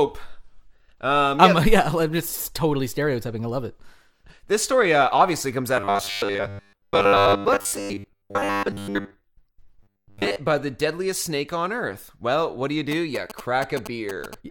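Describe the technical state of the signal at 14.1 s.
At 14.1 s the speech carries GSM signalling bursts, running from 12.92 to 14.35 s. A nearby 2G phone's short radio bursts are rectified by the audio circuit, giving a galloping dit-dit-dit of short 217 Hz buzzes around 10 dB below the speech. A spectrogram shows grouped vertical stripes with a harmonic comb at multiples of 217 Hz. The waveform shows clustered rectangular pulse trains.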